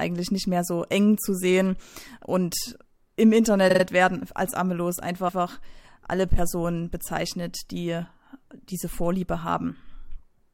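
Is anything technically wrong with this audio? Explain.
Yes. This speech has repeated frames, heard twice. From 3.69 to 3.83 s, a 46.4 ms stretch plays three extra times, a quick triple stutter that fits about two compressed frames being resent. From 5.27 to 5.41 s, a longer 139.3 ms block replays once, consistent with roughly six frames written twice. Each adds 139.3 ms. Unlike a dropout or concealment, nothing is missing or smeared. The same audio simply recurs.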